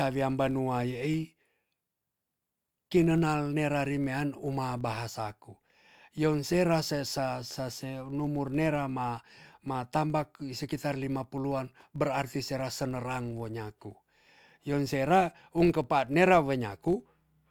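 Across the whole recording, a filter restarted on every block puts a buzz under the speech. The filter drops its memory at each block boundary and starts again from silence. Each restart leaves a small click. They repeat at 43.1 Hz, which fits a 1024-sample block.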